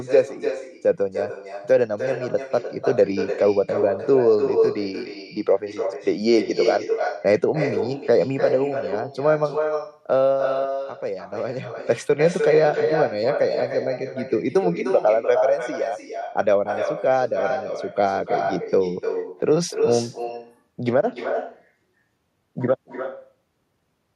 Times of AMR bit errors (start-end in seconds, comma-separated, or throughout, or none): none